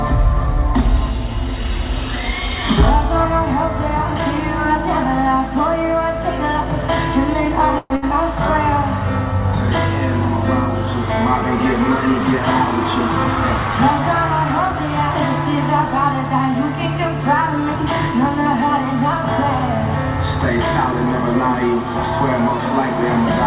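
From 7.78 to 7.92 s the audio stalls, most likely a call audio freeze in which delayed packets let the jitter buffer run dry. The last sound is stretched into a fading buzz for about 120 ms, dipping to near-silence for roughly 10 ms, then carries on where it stopped. Nothing is lost, but the playback falls about 120 ms further behind.

Right after, from 7.96 to 8.04 s, comes a burst of packet loss. A run of packets never arrives in time, so the receiver extends the previous sound as a decaying buzz or hiss for 60 ms. It then jumps ahead, and that 60 ms of the original audio is gone.

Between 12.20 and 13.25 s a jitter buffer speed-up drains excess buffered audio. The receiver repeatedly removes short pitch-period slices, taking out about 40 ms in total, so the sound runs at 104% speed with unchanged pitch.

At 13.36 to 13.38 s a short concealed packet loss drops 20 ms before decoding. The gap is patched almost entirely by skipping ahead rather than by filling it, leaving a brief smear and pulling the delay back by about 20 ms. 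Throughout the clip the call codec leaves nothing above 4 kHz, which fits narrowband G.711.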